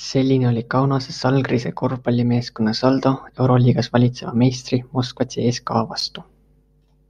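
No technical faults can be heard anywhere in this speech recording. There is nothing to place in time, since no event interrupts or alters the sound at any point.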